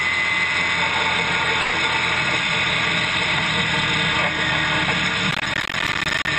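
At 1.61 s the sound stops moving forward and is replaced, until 1.75 s, by a smeared continuation of what came just before: a short buzzy tail that fades rather than cutting off. This is a call audio freeze, likely caused by packets arriving late and the jitter buffer running empty, with the receiver filling about 120 ms. Nothing is lost. Playback resumes where it left off, now about 120 ms later. On a spectrogram the harmonic pattern flattens into a stretched, decaying smear. The waveform shows a fading, repetitive envelope with no dropout to zero.

From 5.31 s to 6.27 s a gritty crackle tears through the sound. This is processor overload crackle: audio buffers were not finished on time, around fifty of them. The gap spacing fits buffers of roughly 10 ms. Each miss drops a short stretch to silence, so the sound keeps getting chopped with hard edges. The waveform shows many abrupt cuts to silence. 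The spectrogram shows dense vertical broadband lines over a band that tops out near 8 kHz, the call path's bandwidth.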